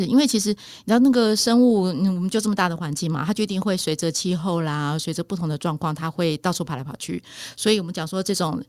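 Speech recording with no technical faults audible anywhere.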